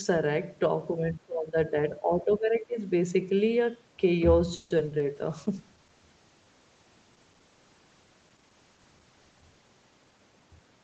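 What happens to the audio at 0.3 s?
At 0.3 s the speech comes through intact, with nothing going wrong at that moment beyond the ordinary call-path band limit that leaves nothing above 8 kHz.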